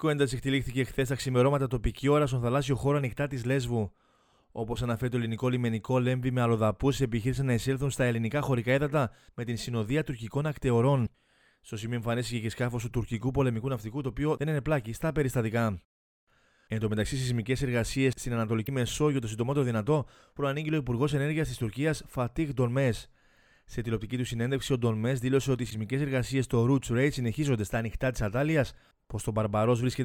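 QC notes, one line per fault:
11.03–11.08 s, 18.64–18.69 s, 25.67–25.72 s: damaged data in a compressed stream. Corrupted bytes make the decoder misread those frames and lose sync until it finds the next frame header, so each 50 ms stretch turns into a brief chirp, squawk, click or short hole in the audio.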